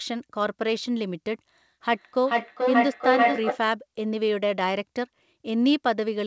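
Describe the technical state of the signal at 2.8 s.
At 2.8 s the speech is smeared by repeats of itself returning roughly every 0.4 s, thin and ringing, and they are building up rather than fading. At their peak they reach about 3 dB above the direct speech. This is feedback echo between two devices, running from 1.9 to 3.67 s. A second device on the call replays the audio into the room, and the first microphone captures it again. Its echo canceller cannot remove sound that another device plays.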